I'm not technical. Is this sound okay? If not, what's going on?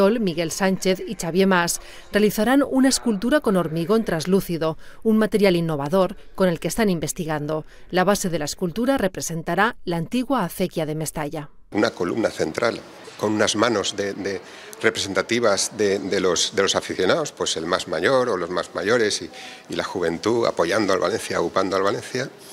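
No. At 5.86 to 5.88 s a single loud pop stands out above the sound, which carries on underneath. It likely came from a plug, switch or static spike.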